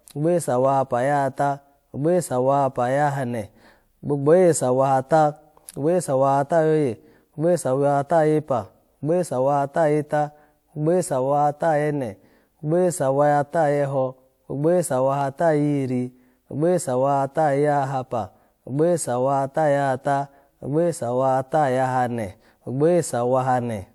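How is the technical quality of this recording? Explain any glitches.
Two brief glitches are audible, both of the same kind. At 0.65 s and again at 15.21 s the speech carries a single sharp click, the likely cause being dropped samples: a fraction of a millisecond of the stream went missing, so the waveform leaps straight from one value to a later one. That gap is far too short to take away any sound, but the sudden step in the waveform produces the click, seen as a thin vertical line across the spectrum.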